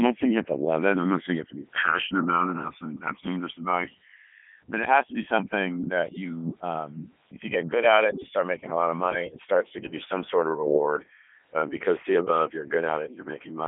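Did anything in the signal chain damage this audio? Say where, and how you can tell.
Yes, two things. Channels drifting apart happens at the converter stage: the two sides were clocked by separate devices. Across the clip the mono sum flanges slowly, as comb notches creep through the spectrum. That fits a clock mismatch of roughly 150 ppm, with the offset reaching a few milliseconds by the end.

The codec stage did heavy damage, all the way through. The speech comes out robotic and buzzy, which is Codec 2 vocoder resynthesis from pitch and envelope. The line band is about 200 Hz to 3.4 kHz, nothing above 3.7 kHz, consistent with Codec 2's top rate around 3.2 kbit/s.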